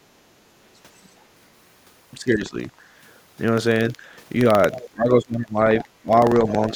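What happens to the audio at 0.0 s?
Right at the start, from 0.0 to about 0.07 s, the speech dips hard, down by roughly 20 dB at its deepest, and comes back within about 70 ms. That's the signature of speech suppressed in double talk. The likely cause is an echo canceller that heard the far end talking at the same moment, couldn't tell this talker apart from the loudspeaker echo, and clamped down on everything.

Underneath that dip, and running the whole clip, there's buffer tearing: a gritty, robotic rattle at about 21.5 Hz, which fits a 2048-sample buffer. The writer and the reader of the ring buffer have drifted so they cross inside every period, leaving a small sliver, something like 2% of each block, filled with audio from around 150 ms earlier, with a hard splice on each side. The buzz rides on the speech itself.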